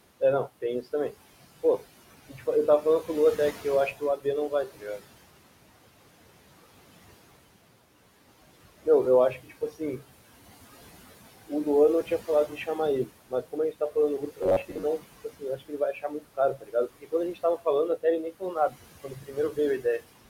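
Speech runs through a noise suppressor throughout, pulling the room noise down by about 17 dB between phrases and letting it swell back under the voice. These noise suppressor artifacts come from gain changing separately in each frequency band. That sets them apart from plain room noise, which sits steadily about 16 dB below the speech and never pumps.

Speech cut by the noise suppressor appears at 0.2–1.14 s, 2.29–2.42 s, 2.82–5.03 s, 9.43–10.01 s, 12.04–12.68 s, 13.06–17.66 s and 17.97–20.04 s. The suppressor mistakes parts of the speech for noise and turns them down by about 10 to 18 dB. The drops are deepest in the last two stretches, where roughly a second and most of a second of sound are affected. Consonants and word tails sound swallowed rather than clipped or distorted, because the level sinks smoothly with the background instead of breaking.

From 14.43 to 14.84 s the voice turns into a rigid, metallic buzz near 94 Hz that still loosely tracks the speech. 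This is robotic sound from repeated short buffers, likely caused by playback repeating a chunk of about 10.7 ms when fresh audio arrives late, with about half the span being repeats. The fixed pitch tells it apart from suppressor warble, which wanders and never locks to one tone.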